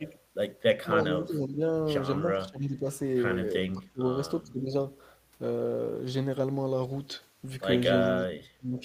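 Echo leak, 0.04 to 0.1 s: a faint delayed copy of the speech, well below the main level, trails it by about 330 ms. The likely cause is a far-end echo canceller letting loudspeaker pickup return down the line.

Speech suppressed in double talk at 0.72 to 1.61 s, 2.27 to 2.86 s, 3.73 to 4.04 s, 4.52 to 4.59 s and 8.59 to 8.81 s: the speech dips sharply, by as much as roughly 30 dB at 3.73 s, likely because an echo canceller mistook overlapping talk for echo and attenuated it.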